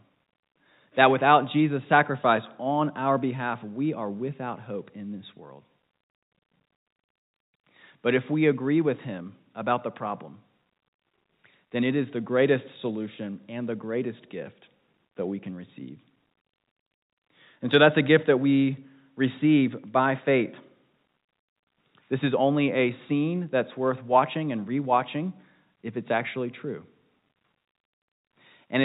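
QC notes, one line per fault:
Nothing here to flag: the speech sits in the ordinary telephone band of G.711 coding, topping out around 4 kHz, with at most a faint hiss that rides along with the level.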